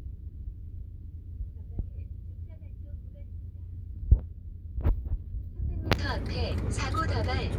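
No technical faults can be heard at any point in the audio.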